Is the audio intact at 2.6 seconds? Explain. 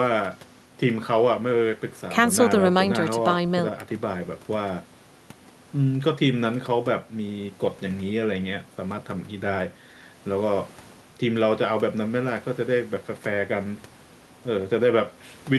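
Yes, the audio at 2.6 seconds is intact, with no audible fault at that moment.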